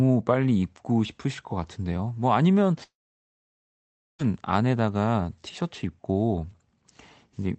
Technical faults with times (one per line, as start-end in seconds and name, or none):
2.83-4.22 long network dropout